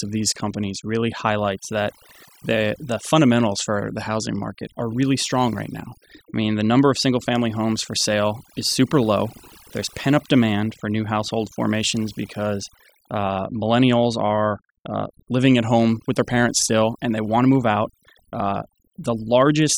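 Overdone noise removal runs through the whole speech clip. The suppressor was pushed so hard that any frequency band close to its noise estimate gets cut deeply, so low-level parts of the voice vanish along with the noise. Between phrases the background drops away, broken by twinkling specks. Unlike a noise gate, which shuts everything at once, this removes individual bands independently.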